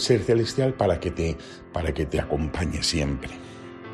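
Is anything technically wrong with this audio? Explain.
No, nothing technically wrong can be heard in this audio. No fault turns up anywhere in the recording.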